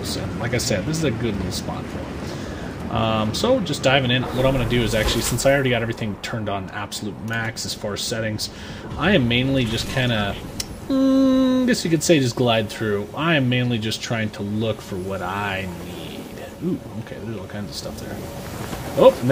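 No technical faults can be heard anywhere in the clip. There are no dropouts, glitches or other disturbances at any point.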